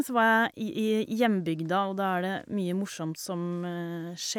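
No technical faults are audible in this speech.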